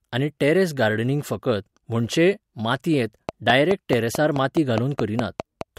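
From 3.29 s to 5.62 s there's a train of clicks running over the speech, about 4.7 per second at a steady, regular spacing, so roughly ten in all. They're sharp, near-identical ticks that stand well above the speech level, around 15 dB louder, and you hear them in the gaps between words too. A regular pulse train like that is likely interference from nearby equipment or a faulty connection or power supply.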